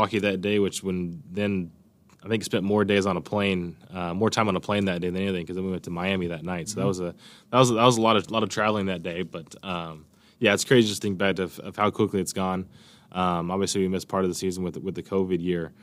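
Nothing stood out as a technical problem anywhere in the recording on listening.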